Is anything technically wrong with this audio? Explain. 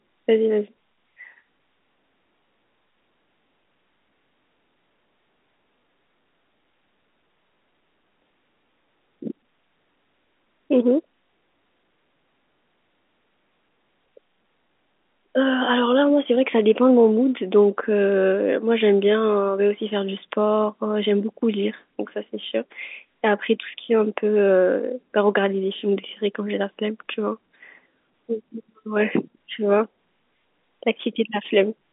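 No, nothing in this speech recording points to a technical fault. It comes through as ordinary G.711 telephone coding, with the band ending below about 3.8 kHz, the narrow line sound of a fixed-line call.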